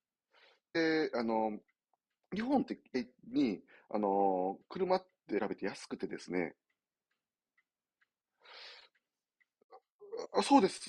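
Damaged data in a compressed stream hits at 0.75 s, 2.94 s, 5.38–5.40 s and 10.24–10.26 s. Each time, the decoder misreads corrupted frames and loses sync, producing a brief chirp or blip. A spectrogram shows thin vertical smears, and the waveform shows abrupt discontinuities.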